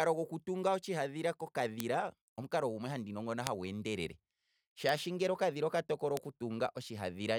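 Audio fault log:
1.80, 3.47, 4.89 and 6.17 s: bit error spikes. Four isolated sharp ticks, about -11 to -17 dBFS. One flipped bit throws one to three samples far off, then back.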